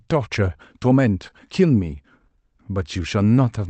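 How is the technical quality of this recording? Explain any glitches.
The speech has a timing problem: small hiccups run through it, with the pace sounding slightly dragged.

Clock drift between sender and receiver: the sender's clock runs about 3% slow, so the receiver's jitter buffer keeps draining and has to stretch things out.

Repeated timing corrections: from 0.06 to 3.46 s the receiver keeps inserting short repeated bits at uneven spacing, playing at 97% speed and adding about a tenth of a second overall.

The Opus call path itself comes through as expected, with its top end stopping around 8 kHz.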